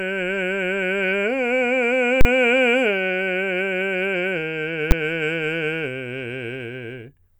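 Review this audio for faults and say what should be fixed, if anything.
The music has two full-scale bursts caused by invalid numbers at full scale. At 2.21 to 2.25 s, a 40 ms block jumps to the maximum output value, so its onset and release land as a hard, loud crack with nothing of the music between. At 4.91 s, a 10 ms block does the same and is heard as a single bang. Both come from a calculation producing infinite or invalid results that were clamped to full scale. To prevent it, check each processing stage for invalid values and replace them with zero before output.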